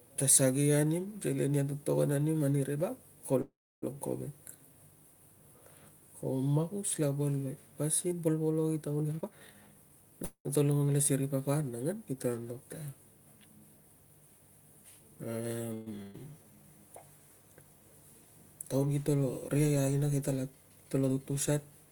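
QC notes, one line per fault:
3.41–3.84 s, call audio freeze: the last sound is held as a fading continuation, then about 310 ms of silence, 409 ms inserted, nothing lost; likely delayed packets draining the jitter buffer.
9.03–10.12 s, jitter buffer speed-up: speech runs at 138% speed with pitch unchanged, roughly 0.4 s of pitch periods cut out to shed excess buffered delay, sounding hurried.
10.24–10.60 s, call audio freeze: 207 ms filled with a fading continuation and about 90 ms of silence, speech resuming where it stopped; likely a late-packet stall.
15.74–15.88 s, call audio freeze: a 126 ms held, fading continuation with no silence before speech resumes intact; likely packets arriving late.
16.02–16.16 s, burst of packet loss: 180 ms of speech missing, concealed by 115 ms of decaying continuation, so the audio resumes further on with a small jump.
16.38–16.68 s, jitter buffer slow-down: pitch periods repeated to add 59 ms, playing at 83% speed with drawn-out sounds while the buffer rebuilds its reserve.
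20.56–21.72 s, jitter buffer speed-up: a milder 109% rate, roughly 0.1 s removed in short pitch-period cuts, giving a slightly rushed pace at unchanged pitch.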